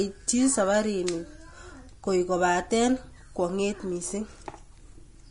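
Throughout the speech, the audio was likely squeezed through low-bitrate Vorbis compression, consistent with roughly 32 kbps. Nothing survives above 10.6 kHz, and the remaining treble is quantised so coarsely that fine detail turns into hiss-like grain, roughening tones and blurring consonant attacks.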